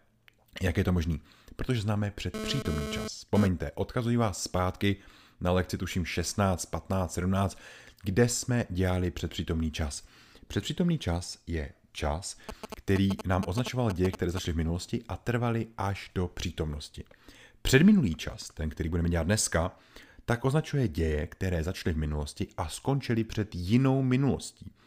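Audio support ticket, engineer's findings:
GSM phone buzz, 2.34 to 3.47 s, ending just before "odkazuji vás zpátky na". A nearby 2G handset moving data, its 217 Hz transmit bursts rectified in the audio circuit. Raspy 217 Hz buzz with many harmonics, about 6 dB below the speech, unrelated to it.

GSM signalling bursts, 12.49 to 14.39 s, between "čas je čas" and "v minulosti a trvaly". A nearby 2G handset sending only short groups of 217 Hz bursts, rectified by the audio circuit. Galloping dit-dit-dit of brief buzzes, roughly 5 dB below the speech.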